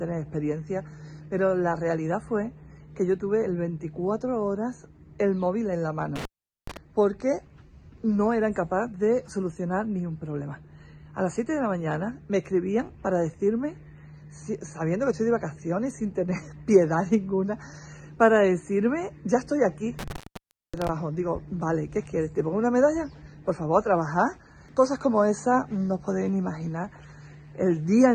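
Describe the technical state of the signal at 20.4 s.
At 20.4 s the signal is inside an intermittent contact fault running from 19.99 to 20.89 s. A loose connection breaks the line for about 0.58 s, leaving faint hiss with crackle at both edges, unlike the clean, silent gap of a digital dropout.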